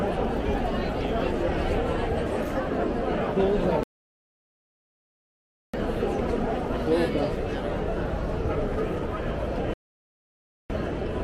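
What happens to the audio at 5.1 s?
At 5.1 s the audio sits inside a rebuffering stall running from 3.83 to 5.74 s. Playback exhausted its downloaded data and halted, giving 1.9 s of silence. The sound then resumes exactly where it stopped, so nothing is lost, but the clip is stretched by that gap.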